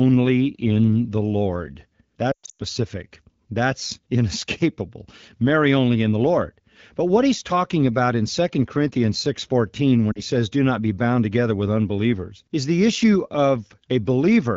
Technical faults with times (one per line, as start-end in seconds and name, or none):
2.32-2.62 lost AMR speech frames
10.12-10.21 lost AMR speech frames